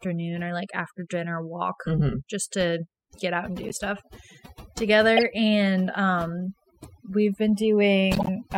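From the start to the end, overdone noise removal is at work: the reduction was set so hard that bands near the noise estimate are pushed down or out, taking quiet speech detail with them. The background sits at a near-silent floor with twinkling specks. On a spectrogram the gaps look black, scattered with isolated bright dots.

A corrupt frame decoded appears at 3.69 to 3.79 s, 5.17 to 5.23 s and 8.13 to 8.29 s. Damaged bits were decoded anyway, and misread codes and gains put energy at the wrong frequencies. Each event is a short squeak or burst spanning a few frames. The one near 5.2 s is loudest, peaking around -5 dBFS. On a spectrogram each shows as a stray, blocky patch, and on the waveform as an abrupt spike.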